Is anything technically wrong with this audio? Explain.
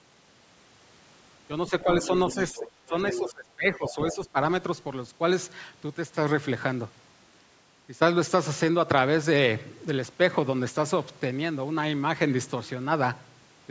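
Yes. Between 1.68 and 4.15 s, other side's voice leaking through: likely an echo canceller failing to remove the loudspeaker signal, so a second voice comes through in scraps at 1.68–1.97, 2.29–2.7, 3.06–3.32 and 3.86–4.15 s, about 15 dB under the speech, and about 10 dB under at the third.

From 1.7 to 4.37 s, speech is suppressed in double talk: the canceller, likely confused by both sides talking at once, turns the talker down, dipping around 15 dB for roughly a second in total.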